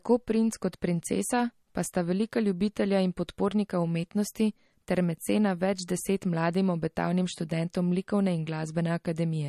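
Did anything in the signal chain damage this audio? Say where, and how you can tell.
Yes. The damage sits at the codec stage and runs throughout. Nothing survives above 13.6 kHz, and the speech sounds plainly watery. That fits MP3 compression, likely at a low bitrate near 40 kbps. Starved of bits, the encoder cut the treble and dropped weak frequency lines frame by frame.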